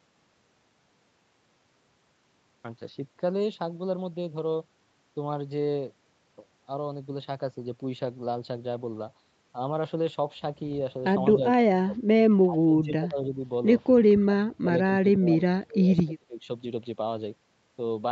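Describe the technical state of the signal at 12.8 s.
At 12.8 s the speech sinks sharply, dipping by up to around 20 dB, with about 0.7 s of the span from 12.45 to 13.43 s affected. This is likely speech suppressed in double talk: the echo canceller could not separate this side's overlapping speech from the far-end echo and attenuated both.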